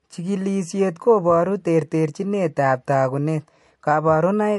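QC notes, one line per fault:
throughout, MP3 compression: the speech stops dead at 11.3 kHz and carries a plainly audible watery swirl, with chirpy, smeared s sounds. The likely cause is a bit-starved MP3 encoder, fitting about 55 kbps, cutting the treble and letting weak frequency lines flicker frame to frame.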